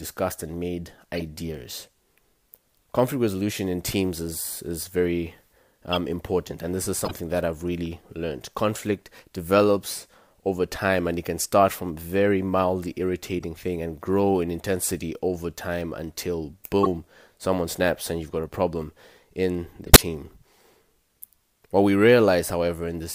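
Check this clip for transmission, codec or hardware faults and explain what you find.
The speech has one recurring fault: corrupt frame decoded, heard six times. It occurs at 1.15–1.22 s after "and made"; at 5.93–5.97 s between "teams is is very" and "important and this is"; at 7.01–7.11 s before "that I've really learned"; and at 13.39–13.44, 16.83–16.87 and 19.86–20.03 s. Damaged bits were played back as though valid, so misread gains and codes put energy at the wrong frequencies for roughly a frame or a few frames each time. This produces sharp squeaks and noise bursts, ranging from faint at 13.4 s to loudest at 20.0 s. Lost packets would instead leave gaps or smeared repeats, not this foreign energy.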